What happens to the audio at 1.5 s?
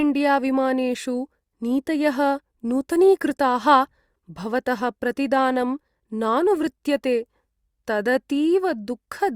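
Nothing goes wrong at 1.5 s; the speech runs through that moment intact, with no dropout, click or distortion.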